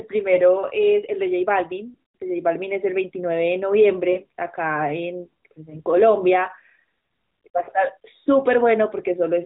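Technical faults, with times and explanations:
0.34–0.40 s, 1.90–1.98 s, 4.12–4.20 s, 5.70–5.82 s and 7.64–7.70 s, lost AMR speech frames: the decoder repeats its last good pitch and vocal tract settings at falling gain, giving brief dips or warbles of 20 to 60 ms, fitting one to three lost frames. A spectrogram shows smeared, fading harmonics, and the waveform shows short amplitude sags.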